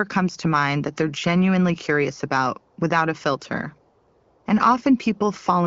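No technical faults can be heard in this recording.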